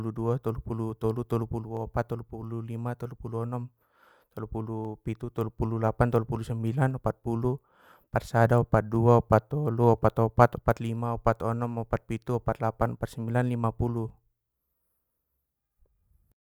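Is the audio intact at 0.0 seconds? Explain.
Yes, the audio is intact at 0.0 seconds, with no dropout, click, distortion or other fault at that moment.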